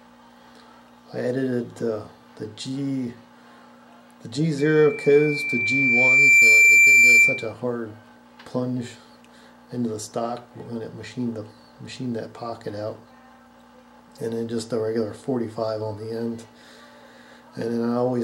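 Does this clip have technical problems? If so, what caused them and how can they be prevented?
Yes. From 4.58 to 7.53 s there's loudspeaker feedback squeal: the mic picks up its own speaker, and a 2.4 kHz tone swells over roughly two seconds to about 15 dB above the sound. Drop the gain, move the mic off the speaker's axis, or notch 2.4 kHz.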